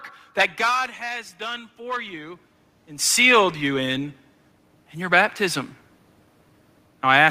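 From 0.57 to 2.46 s the automatic gain rises. The input level dropped by about 13 dB, so the control lifts gain by about 4 dB, swelling voice and room noise together.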